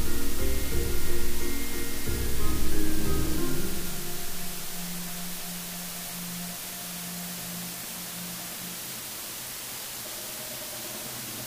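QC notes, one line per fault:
Throughout: low bit depth with dither. The audio is carried on only 5 bits, with dither added before rounding. The rounding error becomes a steady, even hiss rather than distortion. That hiss sits high, around 15 dB below the signal, and never changes.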